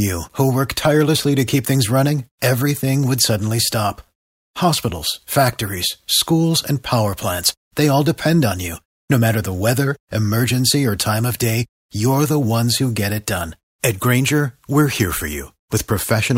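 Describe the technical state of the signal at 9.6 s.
At 9.6 s the speech signal is intact, with no audible fault at that point.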